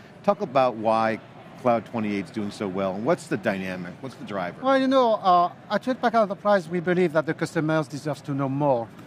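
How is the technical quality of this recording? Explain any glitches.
No glitches can be heard anywhere in the recording, with no dropouts, clicks, distortion or timing faults to report.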